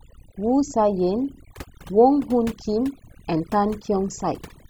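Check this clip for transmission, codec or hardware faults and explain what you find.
One fault runs through the whole speech clip: overdone noise removal. A noise reduction stage was set far too aggressively, so it cuts individual frequency bands deep, or mutes them entirely, whenever their level sits near its noise estimate. Quiet parts of the speech fall into that range and get removed with the noise. The gaps between phrases drop to near silence dotted with twinkling, chirpy specks.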